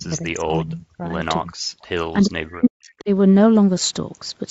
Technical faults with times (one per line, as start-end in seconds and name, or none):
0.00-1.12 speech suppressed in double talk
0.12-0.16 echo leak
1.41-1.76 speech suppressed in double talk
1.81-1.87 echo leak
2.13-3.10 speech suppressed in double talk